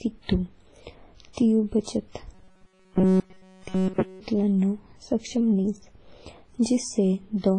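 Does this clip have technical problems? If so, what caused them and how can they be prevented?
Yes. WMA compression, heard throughout: the speech is cut off above about 10.4 kHz and carries heavy codec damage, with a ringing, washy quality and a hiss that swells and fades with the signal. This is likely WMA encoding at a low bitrate, which the sound suggests is around 24 kbps. At that rate the encoder zeroes weak spectral lines and spreads its quantisation noise across long transform blocks. Encoding at a higher bitrate, or with a more modern codec, prevents it.

Pre-echo, at 1.33 s and again at 1.83 s: a short hiss runs ahead of a sharp attack, spreading about 42 ms and 41 ms respectively, and the attacks sound softened. Both attacks fall late in a transform block. The codec spreads noise sized for the loud onset evenly over the whole block, so it also fills the quiet stretch just before it. 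Using an encoder that switches to short blocks at transients, or a higher bitrate, avoids this.

Robotic sound from repeated short buffers, from 2.35 s to 4.20 s, ending just before "लानों सक्षम": the speech turns into a rigid, metallic buzz at 188 Hz that follows the original only loosely. Essentially all of this stretch is repeated material. The likely cause is audio arriving too seldom, so the playback software loops a fragment of roughly 5.3 ms while the real audio is skipped. Larger, steadier buffering and proper packet-loss concealment prevent it.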